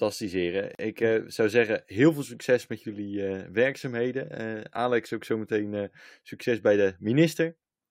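Speech, interrupted at 0.75 s by a gap at a join of encoded pieces: about 41 ms of silence with smeared edges, where encoder start delay and last-frame padding were left untrimmed. Unlike a dropout, nothing is lost; the speech resumes exactly where it stopped.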